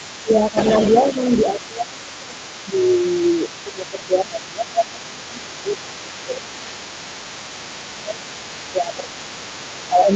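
A speech clip with a faint second voice, about 20 dB below the talker, running throughout, likely the other side's voice leaking through from residual loudspeaker echo; a spectrogram shows weak, overlapping harmonic traces beneath the main speech, all ending near 8 kHz. The talker's level also dips at 0.22–0.57 s by about 10 dB, and by around 15 dB at 1.53–6.44 s, 7.95–8.22 s and 8.71–10.08 s. This is speech suppressed in double talk, likely caused by the echo canceller turning everything down while both sides spoke. On the waveform it appears as dips in the envelope.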